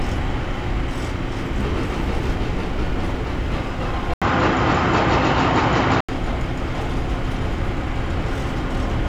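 At 4.14 s the sound drops out for 80 ms, then comes back duller, with nothing above 7.6 kHz, a level shift of around 5 dB and a new, faint noise floor. Likely an input switched to a poorer device, lasting until 6.09 s.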